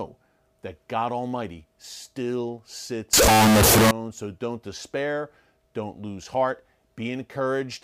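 From 3.13 to 3.91 s the speech turns into a loud, harsh, nearly square buzz, with background noise as loud as the talker. That's float read as integer, likely 32-bit float samples decoded as 32-bit integers.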